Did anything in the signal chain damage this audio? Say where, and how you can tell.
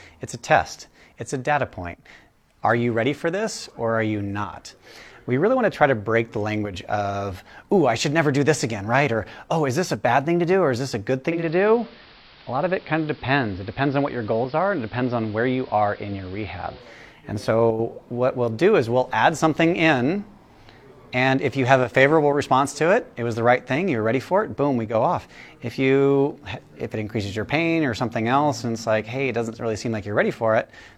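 Yes: digital radio blending to analogue, 11.24 to 17.03 s. The receiver cross-faded over 264 ms to AM, dropping the level by about 1 dB and adding hiss.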